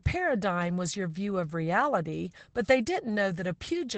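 Throughout the speech, Opus voice compression is plainly audible. The SILK coder cuts everything above 9 kHz and codes the excitation coarsely, which fits a bitrate near 12 kbps. Unlike a plain low-pass filter, it adds hoarse, slightly robotic roughness, not just dullness.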